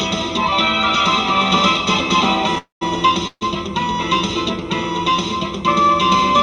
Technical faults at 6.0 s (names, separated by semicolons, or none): channel delay (comb filtering)